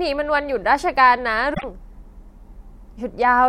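Damaged data in a compressed stream hits the speech from 1.53 to 1.64 s. Corrupted bytes there leave the decoder misreading its frames, losing sync and hunting for the next valid header, so roughly a tenth of a second comes out as a short glitch.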